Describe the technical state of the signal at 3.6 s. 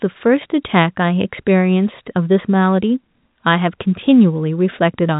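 At 3.6 s the signal is intact, with no fault to be heard, just the ordinary narrow band of G.711 telephone coding, which passes nothing above about 3.8 kHz.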